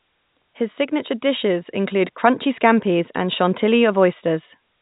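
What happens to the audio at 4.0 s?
Nothing goes wrong at 4.0 s: the speech continues intact, carried as before through the G.711 telephone coding with its band ending near 3.8 kHz.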